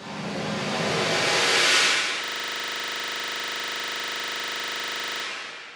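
At 2.24 s the sound locks into a system hang loop and stays stuck until 5.24 s. The machine or its driver froze, but the sound hardware kept replaying the same 40 ms stretch of its ring buffer, over and over, about 75 times. Because the loop repeats 25 times a second, it comes across as a rough, buzzy stutter rather than a clean tone, like a machine gun running fast.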